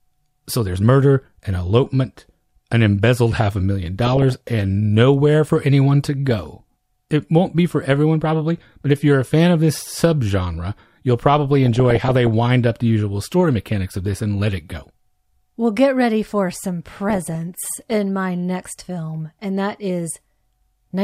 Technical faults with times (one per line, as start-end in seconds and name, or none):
4.07-4.49 DAB burbling
6.29-6.51 DAB burbling
11.66-12.27 DAB burbling
17.10-17.92 DAB burbling